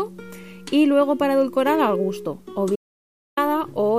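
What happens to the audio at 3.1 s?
At 3.1 s the sound sits inside an audio dropout to silence that runs from 2.76 s to 3.37 s, about 0.61 s in all. The signal stops abruptly mid-flow and returns just as suddenly, with nothing in between: no room tone, no hiss, just silence. That dead-flat gap is what separates it from a natural pause or a gentle noise gate. The likely cause is a lost input while the recorder kept writing zeros.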